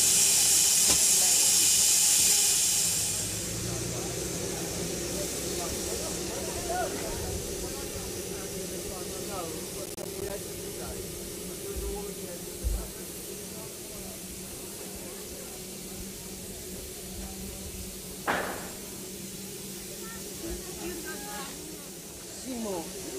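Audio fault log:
9.86–10.30 s: processor overload crackle. About ten short buffers, each roughly 10 ms, arrive late and drop to silence. The hard-edged gaps form a gritty burst.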